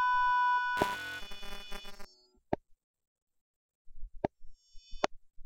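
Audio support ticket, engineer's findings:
Buffer tearing, 0.77–2.05 s: writer and hardware read pointer crossing each 5 ms period; a small slice of each buffer replays audio about 20 ms stale. Result: steady 200 Hz robotic buzz.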